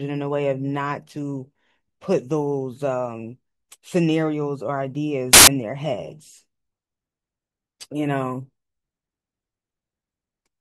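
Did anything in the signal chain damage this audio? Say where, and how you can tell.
Yes. From 5.33 to 5.47 s the speech is replaced by a burst of loud, harsh broadband noise, a sample-format conversion fault: samples built from the wrong bytes. Misordered or misaligned bytes turn each sample's rapidly changing low bits into its dominant part.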